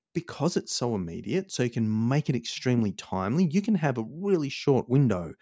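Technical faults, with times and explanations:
No technical faults can be heard in this speech recording. Nothing in the signal calls for a time or an explanation.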